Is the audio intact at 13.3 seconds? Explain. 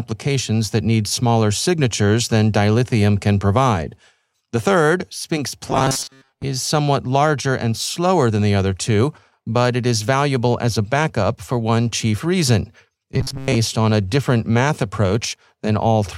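No. From 13.14 to 13.57 s the speech becomes a rigid metallic buzz at a fixed 134 Hz, robotic sound from repeated short buffers. Most of that stretch likely repeats a chunk of about 7.5 ms while real audio is skipped. Unlike dropouts, it never goes silent.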